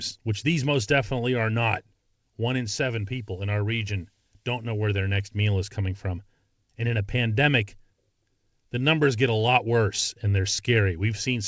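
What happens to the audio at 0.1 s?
Nothing goes wrong at 0.1 s; the speech passes through the call path intact there, with no dropout, click or distortion at that moment.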